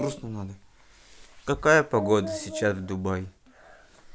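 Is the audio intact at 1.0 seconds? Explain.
Yes, at 1.0 seconds the speech plays through cleanly, with no dropout, click, distortion or other fault at that moment.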